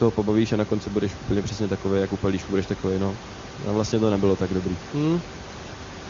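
No technical faults can be heard at any point in the speech.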